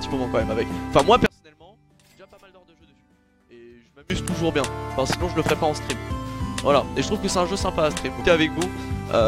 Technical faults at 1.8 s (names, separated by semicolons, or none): one channel inverted